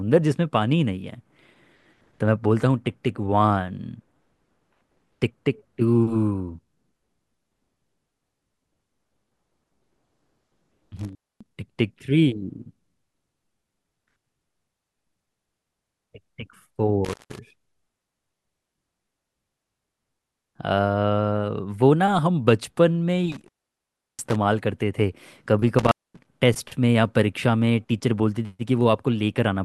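At 10.97 to 11.47 s, 17.05 to 17.39 s, 23.32 to 24.36 s and 25.79 to 26.27 s the speech drops out through an intermittent contact, a loose plug or cable momentarily breaking the signal path. Each break crackles as the contact opens and recloses, and the line stays open for about 0.25 s, 0.17 s, 0.70 s and 0.23 s respectively, leaving faint hiss. The third dropout is the longest.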